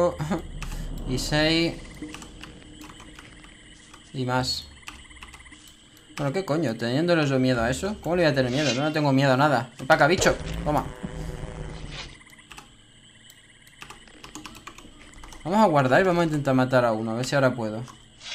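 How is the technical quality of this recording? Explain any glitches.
No glitches turn up anywhere in the recording. Nothing in it points to a technical fault.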